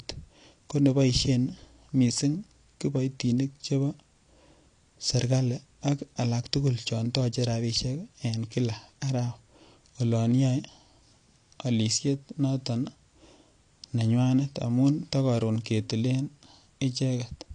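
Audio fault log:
Throughout: AAC compression. Speech has nothing above 9.9 kHz and sounds dull and smeared, likely from AAC-LC coding, which fits a bitrate near 32 kbps.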